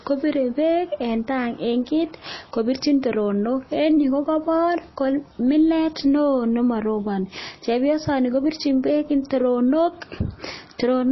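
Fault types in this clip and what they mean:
MP3 compression: The speech has nothing above 5.8 kHz and sounds plainly watery throughout. It is likely low-bitrate MP3, which fits about 24 kbps.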